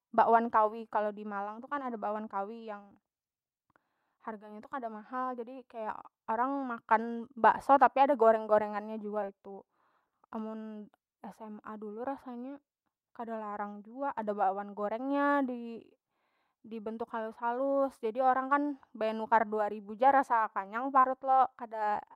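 At 9.21 s, and again from 21.00 to 21.05 s, the speech shows short concealed packet loss: audio arrived too late for the decoder, which filled the hole by extending the preceding sound and then crossfaded back. The first gap, about 10 ms, is a brief smear; the second, about 40 ms, is an audible smear. Unlike a plain dropout, neither falls into silence or clicks hard; the signal glides over the missing stretch.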